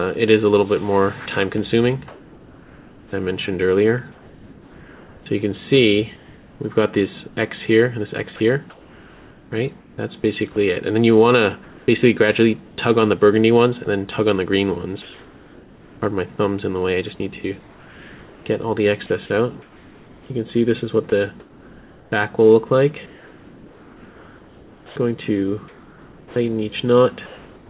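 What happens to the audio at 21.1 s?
At 21.1 s a short piece of sound, about 20 ms, gives way to flat synthetic noise and then returns. This is sound dropped by the voice detector, likely because the sender judged that brief moment to be background and stopped transmitting, leaving the receiver to fill the gap with generated noise. On a waveform it shows as a tiny notch where the signal's shape flattens into even, low-level fuzz. On a spectrogram it is a thin vertical strip where detail vanishes into a uniform wash below the 4 kHz ceiling of the call codec.

That moment falls inside a longer stretch, from 17.6 s to the end at about 27.7 s, where comfort noise in place of the background is heard during the pauses, adding up to roughly 5.3 s. When the sender goes quiet, the receiver likely substitutes steady noise shaped roughly like the real room sound. The natural background texture is replaced by an unchanging hiss. 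On a spectrogram these gaps look smooth and featureless, without the fine flicker of real ambience, and on the waveform they appear as a constant, even band.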